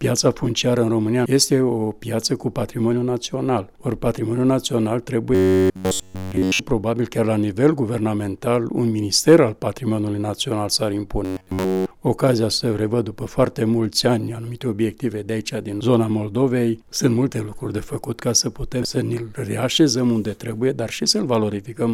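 Audio is likely arriving too seldom for playback, so the software fills the gaps by looping the last short buffer of roughly 10.7 ms while the real material is skipped. The result is robotic sound from repeated short buffers, from 5.35 to 6.61 s and again from 11.25 to 11.91 s. In both stretches essentially all of the audio is replaced by repeats, which impose a rigid, metallic buzz at 93.8 Hz that only loosely tracks the underlying sound.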